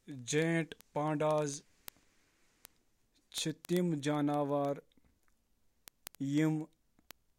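From 0.12 s to 7.38 s, word clock ticks run through the speech. A tick lands about every 40 ms. The receiver's clock is not locked to the sender's. The rate points to a drift of roughly 500 parts per million. Each slip drops or repeats one sample.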